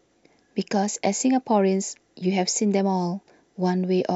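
No technical faults can be heard anywhere in the recording.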